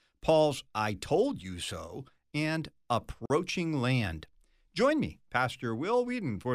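At 3.26 s the speech hits a gap at a join of encoded pieces. The audio was encoded as separate segments and spliced back together without trimming, so the encoder's start-up delay and the padding on the final frame of the earlier segment were both left in. Between 3.26 and 3.30 s this opens a silence of about 43 ms in the middle of continuous speech. Its edges are smeared by the codec, and the speech then resumes exactly where it stopped.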